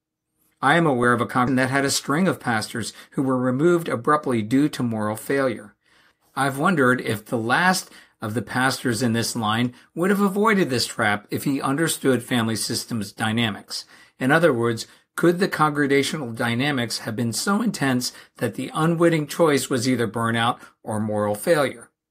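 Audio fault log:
1.47 s, skip ahead: playback jumps forward at this point with no gap filled in, and roughly 0.4 s of speech never plays, so the sound before the jump runs almost directly into the sound after it. The missing stretch was probably dropped in transit or discarded when the jitter buffer overflowed. On a waveform the envelope changes abruptly at the join, and a spectrogram shows formant tracks and harmonics breaking off and resuming at new positions with no silent band between them.
1.57–4.16 s, jitter buffer speed-up: for about 2.6 s the speech runs roughly 6% fast at unchanged pitch, giving a slightly hurried delivery. The receiver was holding more audio than it aims for and worked the backlog down by cutting out short slices of one or a few pitch periods many times in a row, which removed around 150 ms in total. A spectrogram shows harmonic spacing unchanged while syllables and pauses are squeezed closer together, and a waveform shows repeated small discontinuities between pitch cycles.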